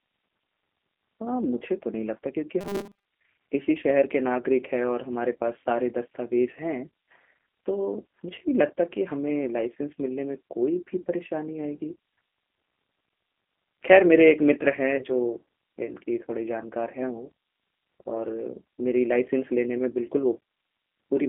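Throughout, the sound is confined to roughly 200 Hz to 3.4 kHz with a rough, synthetic edge, the G.729 codec's signature. This fits an 8 kbit/s coder, not simple band-limiting.

From 2.61 to 3.05 s a rigid metallic buzz at 200 Hz appears, which fits a 5 ms buffer. It is likely robotic sound from repeated short buffers, with most of the audio replayed rather than new.

At 8.36 to 8.38 s and 14.96 to 15.03 s, VoIP packet loss concealed by the speech codec smears the sound into a brief buzzy tone or coloured noise that fades, which fits about 20 ms of audio lost each time. It is a single decaying dip rather than a steady fixed-pitch drone.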